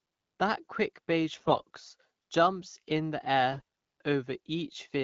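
AMR bit errors flip weakly protected bits from 1.33 to 1.63 s, after "quick beige", and from 3.52 to 3.61 s, after "jumped in the". Misplaced excitation pulses make the speech hoarse and gargly.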